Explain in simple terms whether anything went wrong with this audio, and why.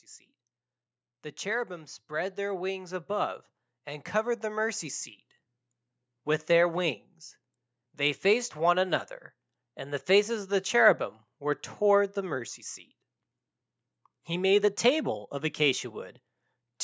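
The automatic gain rising is the problem: the call's volume control judged the input too quiet and slowly turned itself up from 1.67 to 5.11 s. The voice and the background noise get louder together over those few seconds, a gradual swell rather than a jump.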